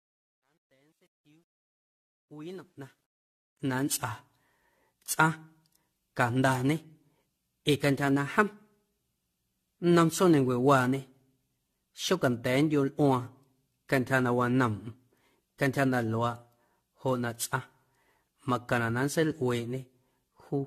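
From 0.0 to 3.99 s the fade-in shows truncation distortion on a fade. The gain stage keeps too few bits without dither, consistent with about 11-bit resolution, so the quiet start turns to coarse steps. It is gritty, worst from 0.0 to 2.41 s.

Throughout the clip there is generation loss, likely from around ten successive lossy encodes in an AAC-LC chain near 64 kbit/s. Nothing is present above 14.1 kHz, and repeated requantisation on shifting frame grids leaves the speech swirly, hollow and smeared, with blurred attacks.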